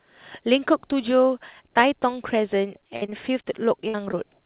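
From 2.96 to 3.45 s, repeated packet loss (robotic sound) leaves four gaps, the longest 56 ms, patched by repeating the last sound. The result is choppy, with smeared, repetitive harmonic bands on a spectrogram.

From 3.81 to 3.98 s, short concealed packet loss fills about 10 ms with continued sound, adding a brief wobble and a short time-stretch.

Inside that, from 3.88 to 3.96 s, a burst of packet loss drops 60 ms. The last sound is held and faded, which shows as a decaying envelope in the waveform before the audio resumes further on.

A second short concealed packet loss at 4.11 to 4.15 s bridges 16 ms with a brief smear. Throughout, the G.711 call path leaves nothing above 4 kHz.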